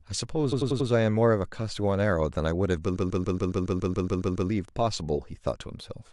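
Repeated frames make the speech stutter: the decoder replays a 93 ms block four extra times from 0.51 to 0.88 s, then a 139 ms block eleven times from 2.95 to 4.48 s.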